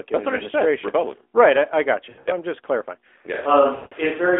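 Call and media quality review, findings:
Lost AMR speech frames, 2.10–2.29 s: broken warble, gaps up to 80 ms. 3.76–3.94 s: 160 ms fade to silence. Failed frames; decoder repeats last parameters, gain falling.

Switch to a distant microphone, 3.35 s to end: sudden roomy, hollow sound, thinner bass, level about unchanged, room noise about 25 dB below speech. Likely close-mic signal dropped, farther mic used.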